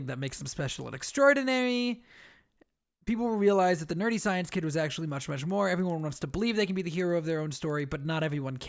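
From 5.0 s, just after "nerdy science kid was", to the end, the resampler restarts on every block. Each 100 ms block is converted from 48 kHz to 16 kHz alone. Its edges lack true neighbouring samples. The speech then carries regular ticks at 10 Hz.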